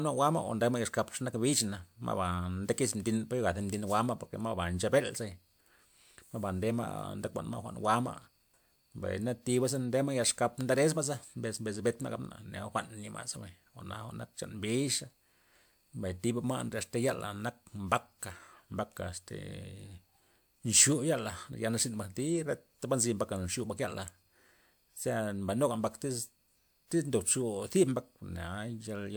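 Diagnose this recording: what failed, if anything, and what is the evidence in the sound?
Nothing failed, and the sound gives no evidence of a fault at any stage of the recording chain.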